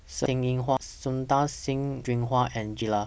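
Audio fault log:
0.26, 0.77, 2.05 and 2.82 s: dropped buffer (overrun). At each point the speech jumps forward with no gap of silence. A stretch of sound is missing and the two sides are butted together. Roughly half a second goes at 0.26 s, about a third of a second at 0.77 and 2.05 s, and nearer three quarters of a second at 2.82 s. The likely cause is buffers being overwritten before they were read.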